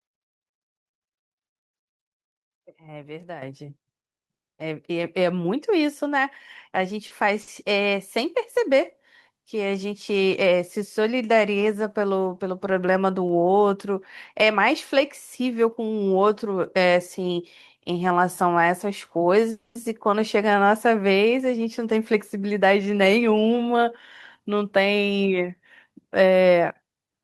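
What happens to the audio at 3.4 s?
Microphone volume stepped up at 3.42 s: the calling software judged the microphone input too quiet and raised the device's input volume in a single jump rather than a gradual ramp. The level rises by about 9 dB almost instantly, and because the change happens at the microphone stage, the speech and the background noise get louder together, with no fade between the quieter and louder sections.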